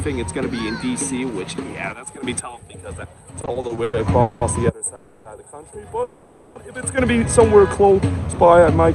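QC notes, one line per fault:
3.41–4.43 s, repeated stalls (stutter): packets kept arriving late, emptying the jitter buffer eight times; the held-over sound fills about 420 ms, longest gap 200 ms, so it drags.
4.95–5.27 s, call audio freeze: likely packets held up in transit; the receiver stretches the last sound for 300 ms, then resumes where it stopped, nothing lost.
6.03–6.57 s, call audio freeze: likely a longer hold-up; the last sound is continued for 520 ms before the audio picks up again, inserting a gap.
7.82–8.82 s, jitter buffer slow-down: the buffer builds reserve by repeating pitch periods, adding 86 ms, so the sound runs at 92% speed with unchanged pitch.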